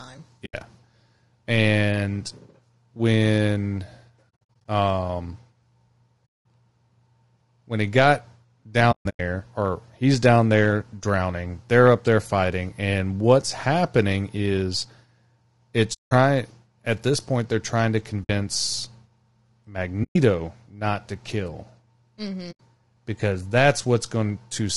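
Throughout, the speech sounds rough and grainy, with noise between harmonics and a dulled top band, likely from low-delay AAC compression at a low rate, around 32 kbps. AAC frame loss with muting then zeroes short stretches, leaving soft-edged holes of about 80 ms at 0.45 s, 220 ms scattered over 4.29 to 4.66 s, 200 ms at 6.26 s, 240 ms across 8.91 to 9.20 s, 180 ms at 15.93 s, 60 ms at 18.23 s, 120 ms at 20.03 s and 80 ms at 22.51 s.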